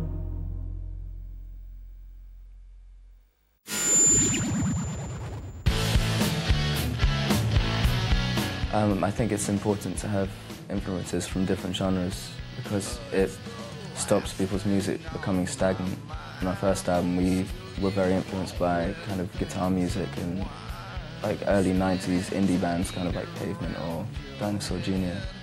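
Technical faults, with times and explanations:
No technical faults can be heard in this clip.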